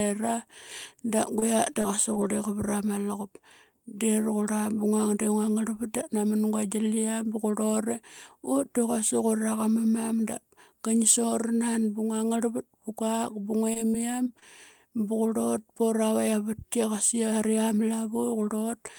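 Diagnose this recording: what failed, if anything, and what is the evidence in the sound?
Network stage: repeated packet loss (robotic sound). From 1.39 to 2.31 s, before "vrama luqup", five gaps break the speech. From 13.73 to 14.44 s, there are four more. Each gap is under 25 ms and filled by stretching the last sound. The result is choppy and robotic.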